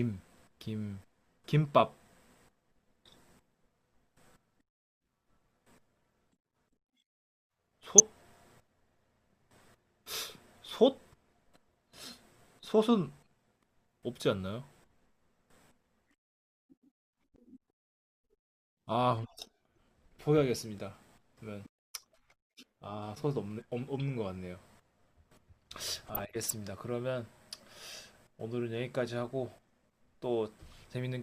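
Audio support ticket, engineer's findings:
DAB burbling over speech at 7.91–8.00 s, 10.91–11.02 s and 26.07–26.50 s. Weak reception lets a fraction of a percent of bit errors past error correction into the MP2 data. Corrupted scale factors make single sub-bands jump for a frame, so the sound burbles rather than dropping to silence as with packet loss.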